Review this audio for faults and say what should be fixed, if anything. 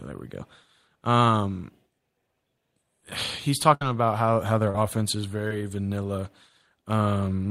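A burst of packet loss runs from 3.74 to 3.82 s. Around 70 ms of speech never arrived in time, and the receiver stretched the last sound across roughly 63 ms while turning it down, so the held sound fades out before the speech picks up further along. On a spectrogram the spectrum freezes and dims across that span, and the waveform shows a decaying, repetitive stretch. Larger jitter buffering plus forward error correction or redundancy on the link would prevent it.

Short concealed packet loss occurs twice, at 4.70–4.75 s and at 5.48–5.51 s. At the first, about 40 ms went missing and about 41 ms was synthesised. At the second, about 20 ms went missing and about 19 ms was synthesised. In each case the decoder continued the preceding sound and blended back, leaving a brief smear or wobble. A spectrogram shows a short smudged patch with blurred onsets, and the waveform a brief altered stretch that blends back into the speech. 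Enabling in-band FEC would prevent it.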